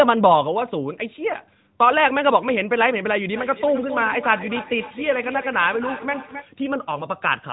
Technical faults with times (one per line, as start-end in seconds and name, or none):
3.33-6.51 feedback echo between two devices